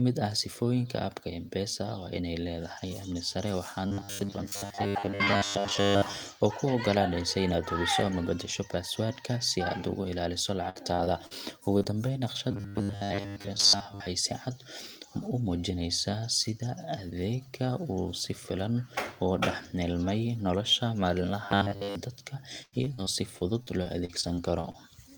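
From 3.87 to 6.16 s the speech becomes a rigid, metallic buzz at 100 Hz that still loosely tracks the syllables. This is robotic sound from repeated short buffers, likely caused by audio arriving too seldom so that the last 10 ms or so is looped. Most of the real signal is skipped. On a spectrogram this shows as evenly spaced horizontal harmonics locked to 100 Hz. The same buzz returns from 12.51 to 14.06 s and from 21.45 to 21.95 s.

Between 10.69 and 11.33 s there is repeated packet loss (robotic sound). Four holes, the longest 54 ms, are patched by continuing the previous sound, which makes the speech choppy and mechanical. On the waveform, stretched, overly regular cycles replace the natural contour, covering about a quarter of that span.

Two back-to-back cases of short concealed packet loss follow, at 11.79 to 11.83 s and 11.83 to 11.87 s. Each has 20 ms missing and filled from the preceding sound. 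Together they are heard as a brief smear or wobble, and they appear as a smoothed, slightly repetitive patch.

From 22.63 to 24.76 s, twelve more concealed gaps occur, the longest 97 ms. They give a sustained choppy, robotic texture. The spectrogram shows repeated blurred stretches cutting into the speech harmonics.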